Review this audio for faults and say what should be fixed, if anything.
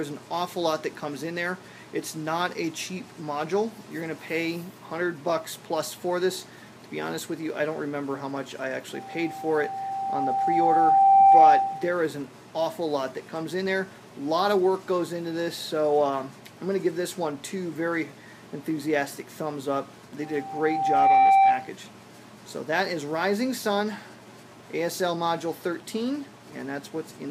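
Loudspeaker feedback squeal at 8.94–11.98 s and 20.22–21.71 s. The microphone hears its own loudspeaker, and at 781 Hz the loop gain exceeds one. The tone swells over about two seconds, then one, to about 15 dB above the sound. Lower gain or move the microphone away from the speaker.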